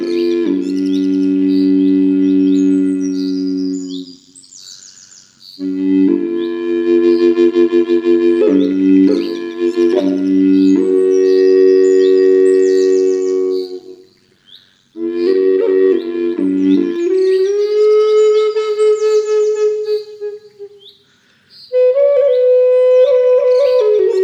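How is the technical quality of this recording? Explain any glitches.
Quality takes a clear hit early on. From the start to about 16.97 s there's overlap-add ripple: the sound was framed, windowed and rejoined with overlaps that don't sum evenly, so the level dips by about 11 dB around 100 times a second, giving a metallic buzz with extra tones around each note.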